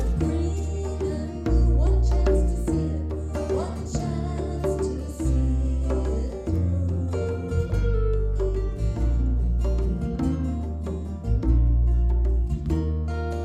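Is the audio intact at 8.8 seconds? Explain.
Yes, the audio is intact at 8.8 seconds, with no fault audible at that point.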